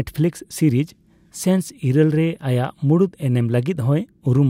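No technical faults are audible.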